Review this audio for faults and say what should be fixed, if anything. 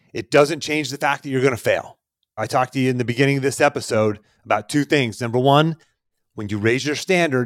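Nothing in this recording needs fixing, so it can stay as it is.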